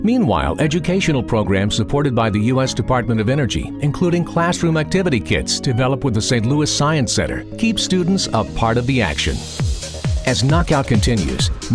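Nothing in this one stands out as a technical problem; there's just nothing here to flag.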